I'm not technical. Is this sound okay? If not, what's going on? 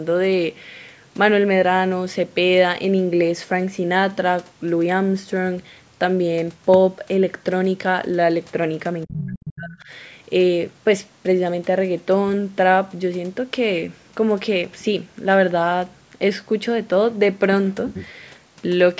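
No, not quite. From about 9.05 to 9.9 s the speaker's voice sinks way down and breaks up in pieces. That's speech suppressed in double talk: both people likely talked at once, and the call's echo canceller couldn't tell them apart, so it turned everything down.

In that same stretch there are two brief scraps of a second, fainter voice, at 9.11 to 9.18 s and 9.45 to 9.51 s. That's the other side's voice leaking through: the far end playing on a loudspeaker and likely not fully scrubbed from the microphone.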